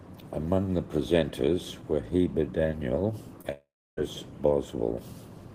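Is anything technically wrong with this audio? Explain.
Yes, there are two faults in this speech clip, close together.

From 3.41 to 3.46 s there is a short concealed packet loss. About 20 ms of audio never arrived in time, and the decoder bridged it by extending the preceding sound for roughly 25 ms before blending back, which is heard as a brief smear.

From 3.52 to 3.99 s the sound carries on as a fading continuation, then drops to silence for about 320 ms before resuming, with about 460 ms of material gone. This is likely a long network dropout, in which the receiver concealed the gap until it gave up.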